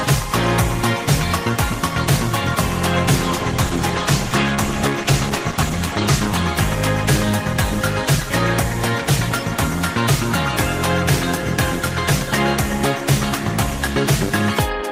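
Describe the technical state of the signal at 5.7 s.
A call bitrate drop is under way at 5.7 s, part of a span from 3.24 s to 7.01 s. The connection's bandwidth estimate fell and the encoder was forced to spend far fewer bits, a change that fits a cut from around 32 kbps to 16 kbps. At 5.7 s the audio sits in the lowest stretch, which holds for about 2.95 s. It sounds coarser and more muffled, with the high frequencies trimmed away, until the rate recovers.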